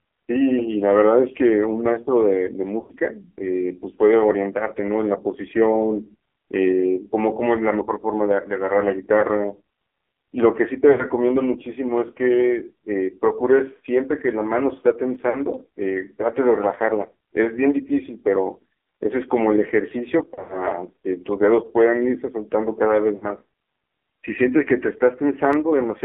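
The whole clip has gone through the AMR narrowband mobile codec at 5.9 kbps, squeezed into roughly 300 Hz to 3.4 kHz, so the speech comes out buzzy, thin and quite synthetic throughout.

On top of that you get lost AMR speech frames. Dropouts at 2.80 to 2.96 s (about 100 ms), 9.2 s (20 ms), 10.92 to 11.05 s (60 ms), 15.30 to 15.39 s (40 ms), 20.34 to 20.66 s (140 ms scattered over 160 ms, longest stretch 100 ms) and 23.16 to 23.27 s (60 ms) each make the decoder repeat its last pitch and vocal-tract settings at falling gain. The short ones sound like a quick warble. The longer ones smear and fade before the sound comes back rough.

There are also two sharp single clicks at 15.15 s and 25.53 s, likely dropped samples, where the waveform jumps ahead by about a tenth of a millisecond.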